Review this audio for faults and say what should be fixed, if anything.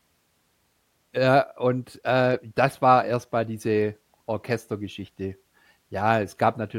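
No faults found; nothing here needs fixing.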